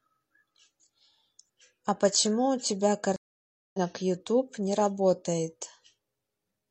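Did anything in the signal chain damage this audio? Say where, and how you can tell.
Yes. A stream reconnect at the network stage, from 3.16 to 3.78 s: the speech drops into about 577 ms of silence, then resumes roughly 0.3 s further on. The link broke, and the player reconnected and restarted its decoder mid-stream, skipping the missed audio.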